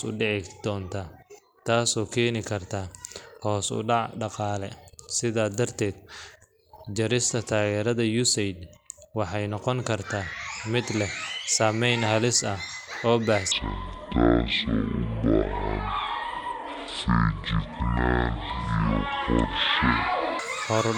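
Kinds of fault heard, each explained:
Section at the wrong speed: From 13.52 s to 20.39 s, the speech plays at half its recorded speed. Speed and pitch fall together at the moment it starts. The voice turns deep and slow, dropping roughly ten semitones, and each syllable is stretched to twice its length. The likely cause is that this stretch was fitted to the wrong clock during editing or playback, so its samples ran out at the wrong rate.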